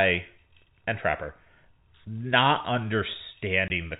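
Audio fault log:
3.68 to 3.70 s, packet loss filled with silence. The speech cuts out for 20 ms near the end. Silence replaced the missing audio, so the sound stops and restarts abruptly with hard edges. The gap fits one lost 20 ms packet.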